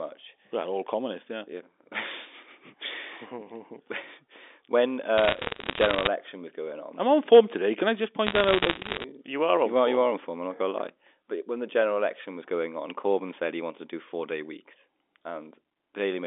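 Bit errors on a digital phone line crackle at 5.18–6.07 s and 8.27–9.04 s. Each flipped bit changes one sample, and a hit on a high bit leaves a one-sample waveform spike and a thin vertical spectrogram line.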